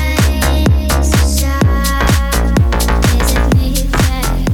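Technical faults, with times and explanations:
Nothing here to flag: no technical problems turn up anywhere in the audio.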